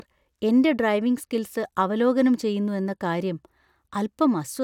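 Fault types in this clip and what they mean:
Nothing to flag here, as no technical faults turn up anywhere in the recording.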